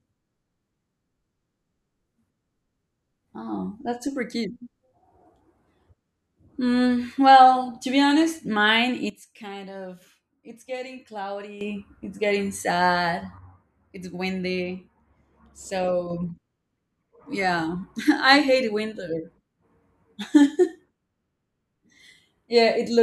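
At 9.10 s the speech and its background noise drop together by about 12 dB, returning at 11.61 s. A second drop of about 6 dB runs from 13.38 to 16.10 s. Both are sudden gain jumps, likely a gain change applied without a ramp. The steps are instant, not faded or pumping.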